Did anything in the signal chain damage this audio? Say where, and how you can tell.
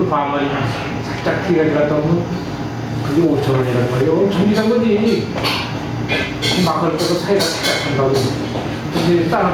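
Yes: gain pumping throughout. The gain is pulled down roughly 10 dB under each loud sound, likely from input gain set too high feeding a fast limiter at the processing stage.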